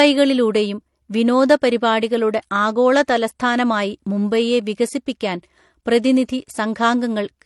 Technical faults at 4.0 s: transcoding between lossy codecs

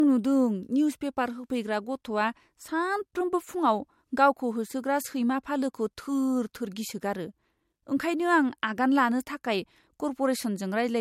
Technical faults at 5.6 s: low-bitrate audio saved at a high bitrate

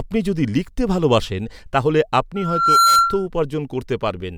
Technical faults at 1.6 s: none

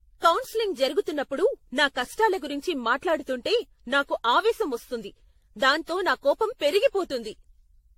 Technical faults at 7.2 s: generation loss

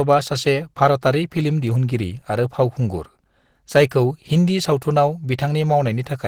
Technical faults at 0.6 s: Opus compression

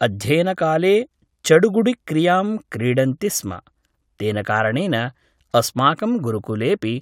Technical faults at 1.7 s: none

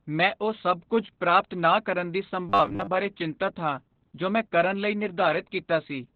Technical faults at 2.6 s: Opus voice compression; robotic sound from repeated short buffers

